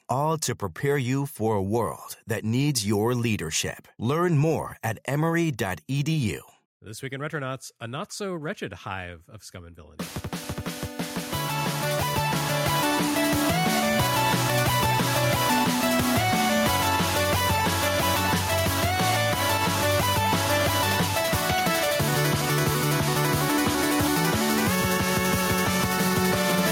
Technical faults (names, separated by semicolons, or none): gain pumping